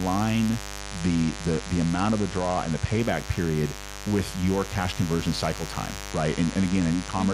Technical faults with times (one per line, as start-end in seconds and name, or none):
0.00-7.34 mains buzz
0.80-2.99 Bluetooth SBC bit pool drop
6.10-7.34 Bluetooth SBC bit pool drop